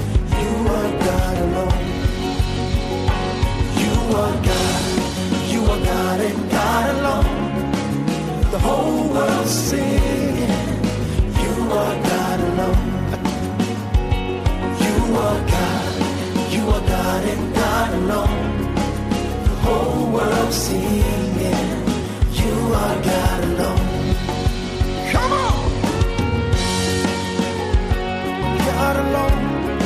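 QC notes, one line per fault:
Nothing stood out on listening.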